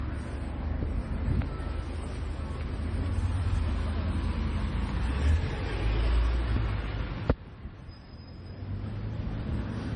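From start to finish the audio carries stacked codec damage, likely transcoding between lossy codecs: an MP3 pass, then AAC-LC. Nothing survives above 9.6 kHz, and both codecs' swirly, smeared artefacts sit together, which fits about 32 kbit/s at each stage.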